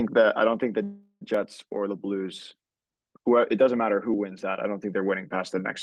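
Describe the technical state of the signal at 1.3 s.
A call audio freeze runs from 0.83 to 1.23 s: the last sound is stretched into a fading buzz for about 0.38 s, with roughly 50 ms of silence, then resumes where it stopped. The likely cause is delayed packets draining the jitter buffer, so nothing is lost but the audio after it lands about 378 ms late.

At 1.34 s, a dropped buffer (overrun) follows: a small jump forward, where about 10 ms of audio is cut out and the two sides are butted together. This is likely the program failing to read its samples before the hardware overwrote them.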